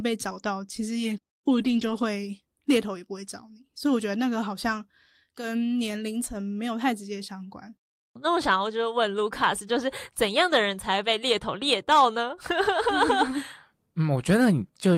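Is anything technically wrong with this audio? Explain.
Yes. From 1.49 to 2.03 s, there are lost packets rebuilt from error correction. Low-bitrate backup copies filled about 280 ms of gaps, so the speech turns briefly rough and noisy.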